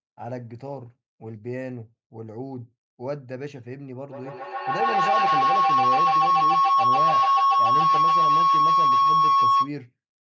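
At 4.1 s a feedback howl sets in and runs until 9.74 s: two devices in the same room share the call, so sound leaving the loudspeaker re-enters the microphone louder on each pass. The repeats narrow onto a tone near 1 kHz, pulsing roughly every 150 ms, and peak about 13 dB above the speech. Unlike an ordinary echo, whose copies decay, these copies grow, and unlike a steady interfering tone, the howl swells with the loop's rhythm.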